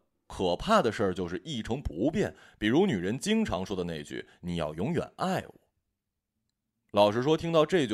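No technical faults can be heard anywhere in the recording; the signal stays intact and undisturbed throughout.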